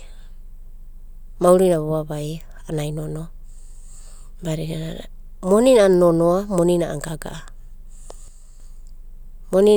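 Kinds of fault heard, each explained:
Sudden gain jump: at 8.28 s the speech and background noise drop together by about 4 dB until 8.6 s, likely a gain change applied without a ramp.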